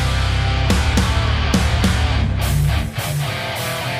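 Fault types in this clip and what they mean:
No technical faults are audible.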